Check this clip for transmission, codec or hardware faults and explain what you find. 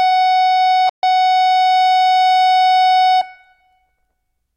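There is one fault in this music clip, a playback stall at 0.89 to 1.03 s. The music cuts out in mid-flow and the output goes silent for about 136 ms, then resumes. The likely cause is that the player ran short of buffered data, or its audio thread was briefly blocked, so nothing reached the output until it caught up. It is heard as an abrupt hole in the music rather than a fade, followed by a sudden restart.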